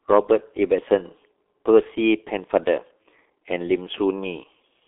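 Throughout, heavy G.723.1 codec damage: nothing above 3.6 kHz survives, and the sound points to roughly 6 kbit/s low-rate coding, leaving speech muffled, hoarse and blurred.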